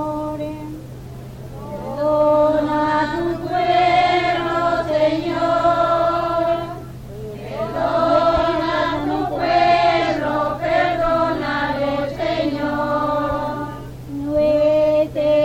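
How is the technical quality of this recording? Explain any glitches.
The recording has one glitch. Mains hum appears from 10.56 to 12.61 s: a ground loop or nearby transformer lets the 50 Hz power supply leak into the signal, adding a steady low tone with some low harmonics, sitting roughly 30 dB below the main sound.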